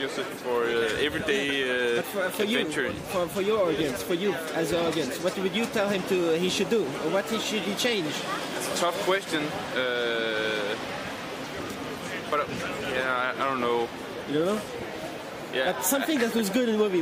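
Nothing goes wrong anywhere in the clip, so there's no technical fault to point to.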